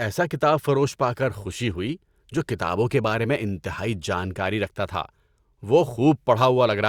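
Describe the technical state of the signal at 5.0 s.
At 5.0 s the speech signal is intact, with no dropout, clipping, distortion or other fault audible.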